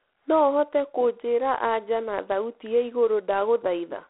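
Speech runs through G.726 ADPCM coding for the whole clip. A harsh, rasping hiss tracks the speech level, which fits 24 kbit/s. Nothing passes above 3.9 kHz.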